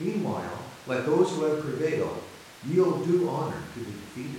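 No technical faults are audible in this speech recording.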